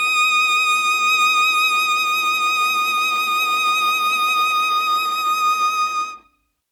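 Nothing here sounds broken: the music runs its whole course without a single glitch catching the ear.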